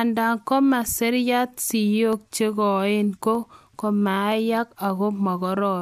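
Three sharp clicks cut through the speech, at 2.13 s, 3.35 s and 4.32 s. Each is a single, brief tick with no gap audible around it. The likely cause is dropped samples: a fraction of a millisecond missing from the stream, so the waveform steps abruptly from one value to a later one. On a spectrogram each click appears as a thin vertical line spanning the frequency range, and the waveform shows a sudden discontinuity at that point.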